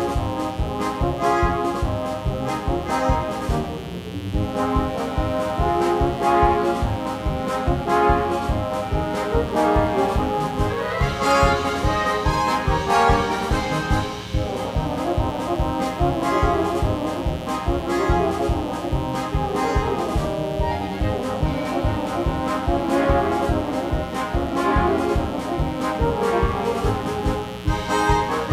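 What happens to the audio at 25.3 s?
At 25.3 s a mains buzz is present, as it is throughout the clip: switching spikes from the 60 Hz supply leak into the signal path twice per cycle, spraying harmonics up into the kilohertz range and laying a steady, raspy buzz roughly 15 dB below the audio.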